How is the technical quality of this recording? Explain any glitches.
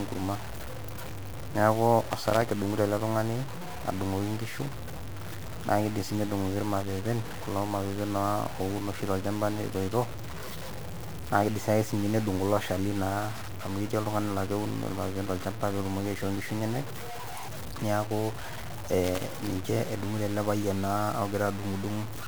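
The technical quality is poor: the whole recording is coarsely quantised, and a loose connector crackles twice.

Throughout, the speech appears to have been reduced to very few levels, most likely low bit depth without dither, consistent with around 6 bits truncated. Because the rounding error tracks the signal, it sits only roughly 15 dB below the speech, making it grainy and gritty, with quiet tails breaking up or sputtering.

At 2.12 to 2.51 s, just before "edungoto ele tungani", and again at 19.04 to 19.47 s, there is loose connector crackle. An unstable contact repeatedly makes and breaks, chopping the signal, so each stretch comes through as an irregular, scratchy burst lasting under half a second.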